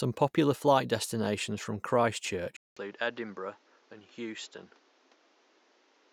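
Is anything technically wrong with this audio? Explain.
Yes. From 2.57 s to the end, after a 0.2 s silence, the speech loses everything above 7.6 kHz, drops a few dB and gains a new noise floor roughly 30 dB down. This is likely an input switched to a poorer device. A simple filter wouldn't add the gap, level shift or new noise.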